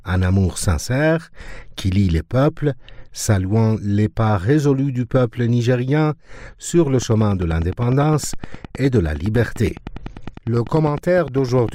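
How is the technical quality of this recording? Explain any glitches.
The recording has one clear fault: from 7.02 s to 11.70 s a train of clicks ticks steadily at about 9.9 per second, roughly fifty sharp pops peaking about 5 dB above the audio, likely from interference or a faulty connection.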